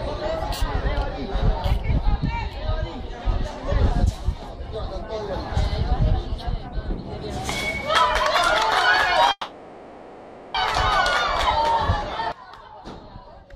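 A call audio freeze runs from 9.31 to 10.57 s. The last sound is stretched into a fading buzz or hiss for about 1.23 s, with only a brief silence, then the audio resumes where it stopped, so nothing is lost but everything after arrives 1.23 s late. The likely cause is delayed packets draining the jitter buffer.

One channel inverted affects the last stretch, from 12.32 s to the end at 13.56 s. The level falls by about 18 dB and the sound turns faint, as the centred content cancels, likely because one stereo channel's polarity is reversed before the mono sum.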